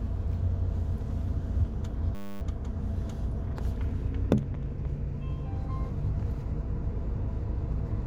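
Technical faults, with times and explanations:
2.15 to 2.41 s, system hang loop: the machine or its driver stalled, and the sound hardware kept replaying the same 10 ms chunk of its ring buffer over and over, about two dozen times. Because the loop is so short, it doesn't stutter. It fuses into a steady, flat buzz at 100 Hz, the loop rate. When playback recovers, roughly a third of a second of real audio is simply gone.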